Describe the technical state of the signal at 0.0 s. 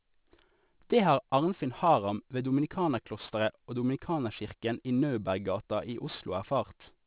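At 0.0 s the speech already sounds gritty and metallic in its sibilants, with energy packed hard against 4 kHz. This is aliasing, present throughout, consistent with unfiltered downsampling to 8 kHz, which folds higher content back as false tones roughly 25 dB below the signal.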